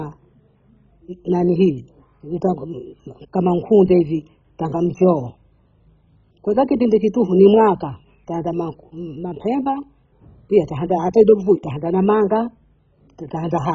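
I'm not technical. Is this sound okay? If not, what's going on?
No. MP2 compression damage runs through the whole clip: the speech sounds dull and gurgly, with a grainy edge. This is likely from squeezing it very hard into MP2, which drops all the brightness above 7.5 kHz and roughly approximates what remains.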